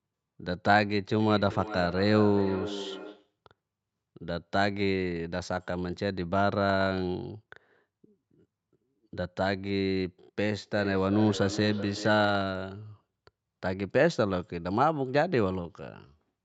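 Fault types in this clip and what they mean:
Feedback echo between two devices: a second device in the room is playing the call back, and this microphone picks it up again. Its own echo canceller can't remove that, so speech returns roughly every 400 ms, peaking about 12 dB under the direct speech, around 1.2–3.4 s and 10.6–12.6 s.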